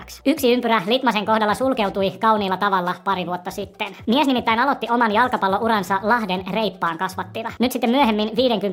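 Everything runs high and hurried from start to finish, sped up by a factor of 1.5 and raised by about 7 semitones. This is a wrong sample rate fault: audio recorded at 32 kHz is being played back at 48 kHz with no conversion, so speed and pitch rise together.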